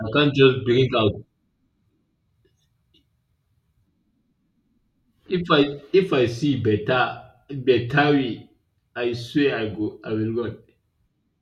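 No technical faults can be heard anywhere in this speech recording. There is no moment in it that needs to be marked or explained.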